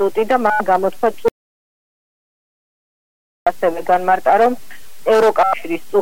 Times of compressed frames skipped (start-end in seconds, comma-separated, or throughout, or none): none